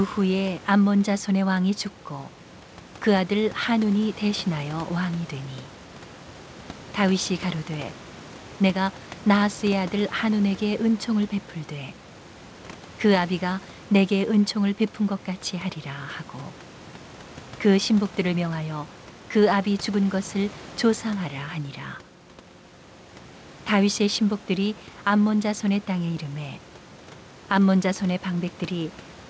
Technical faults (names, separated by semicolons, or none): none